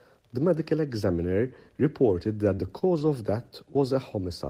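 From 2.55 to 3.09 s the speech turns choppy: repeated packet loss. Four short gaps, the longest 29 ms, are patched by extending preceding sound, concealing about 13% of the span. A spectrogram shows repeated, smeared harmonic strips with brief dropouts between them.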